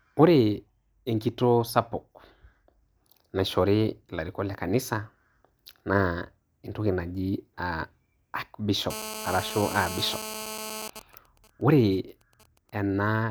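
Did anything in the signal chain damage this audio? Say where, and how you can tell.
Yes. From 8.91 to 10.88 s a hard, raspy GSM phone buzz sits under the speech at about 10 dB below the signal. Its fundamental is 217 Hz, with a dense stack of harmonics, and it holds steady with no relation to the talker. The damage is in the analogue stage. A 2G handset in an active call nearby pulses its transmitter 217 times a second, and a junction in the audio wiring or preamp rectifies those RF bursts into audible pulses.

From 10.89 to 12.70 s the continuous buzz gives way to GSM signalling bursts. These are even ticks with a longer 217 Hz buzz twice a second, sitting around 20 dB under the signal. This is the same analogue rectification path, but the handset is now sending only short groups of bursts. That fits a phone still in its call whose user has gone quiet, so it transmits in sparse clusters rather than continuously.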